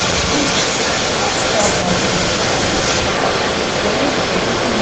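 Throughout the clip, a delayed copy of the speech trails about 0.24 s behind, about 5 dB louder than the original. This echo leak likely comes from a speakerphone's echo canceller missing returned sound.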